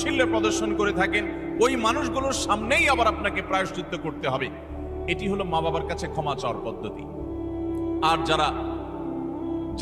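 No technical faults can be heard anywhere in the audio.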